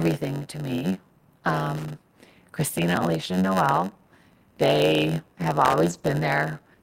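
Throughout the clip runs a block size mismatch with padding. One stage delivers blocks shorter than the next stage expects, and the remainder of each block is zero-filled. The result is a steady buzz at 91.9 Hz laid over the speech, which also plays at 0.919 times normal speed. On a waveform this shows as regularly spaced flat gaps about 11 ms apart. On a spectrogram it appears as fine vertical striping, with a harmonic comb at multiples of roughly 92 Hz.

From 1.39 to 1.43 s, just after "to me", there is a short concealed packet loss. About 20 ms of audio never arrived, and the receiver filled the hole by extending the preceding sound before blending back into the real signal. It is heard as a brief smear. A spectrogram shows a short stretch where the natural detail is missing.

Loose connector crackle follows from 1.77 to 1.90 s and again from 5.65 to 5.73 s. A faulty contact is making and breaking rapidly, chopping the signal into an irregular scratchy burst. 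The waveform shows jagged dropouts and sharp spikes, and the spectrogram shows scattered broadband vertical lines across all frequencies.

At 3.39 to 3.41 s, and again from 5.85 to 6.13 s, come stretches of lost packets rebuilt from error correction. The first covers 20 ms and the second 140 ms, which fits about seven 20 ms packets. The decoder played the low-bitrate copies carried in the following packets, so nothing drops out, but those moments sound rougher and noisier. On a spectrogram they appear as patches where the harmonic structure turns grainy and less sharply defined, without any gap in the waveform.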